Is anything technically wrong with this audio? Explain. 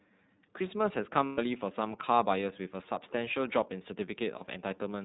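Yes. The speech has been through the iLBC codec, and it has lost iLBC frames in two places.

The iLBC coding runs throughout. It codes each frame's excitation independently and discards everything above 4 kHz, so the speech sounds plainly rough and synthetic. The coding uses 30 ms frames at the 13.33 kbps mode. A spectrogram shows an empty region above 4 kHz.

The lost iLBC frames fall at 1.26 to 1.39 s, about 120 ms, and at 4.38 to 4.42 s. At each gap the decoder repeated the last pitch cycle with added noise, which sounds like a held, buzzy vowel. A spectrogram shows flat, smeared harmonics there, and the waveform shows repeating cycles.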